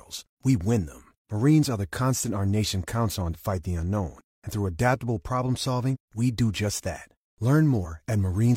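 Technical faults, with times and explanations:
3.30–3.36 s, 5.90–5.97 s and 7.81–7.86 s, compressed frames skipped: each time the speech lurches forward by about a twentieth of a second, first between "our nation counts on" and "fight the unknown", then between "through adaptable problem" and "we do just that". Whole compressed frames never reached the output, so playback jumped ahead.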